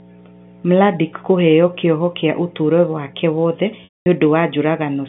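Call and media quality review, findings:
Mains hum, full clip: steady low 60 Hz tone with low harmonics under the telephone-band speech, roughly 15 dB below it. Probable component: ground loop or nearby transformer, coupling the power line into the signal path.

Packet loss with pitch repetition, 3.84–4.06 s, right after "kĩa ũtũũrũ wake wothe": brief held buzzy pitch fading to silence, then speech cross-fades back. Probable component: network path plus receiver concealment repeating the last pitch period across a 220 ms gap, consistent with 22 lost 10 ms packets.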